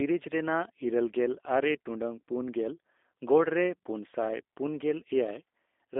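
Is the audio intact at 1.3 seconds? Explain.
No, at 1.3 seconds the speech is still running through a G.729 codec, as it is for the whole clip, rebuilt from a filter and a few pulses, so it sounds rough and slightly synthetic, with nothing above 3.8 kHz.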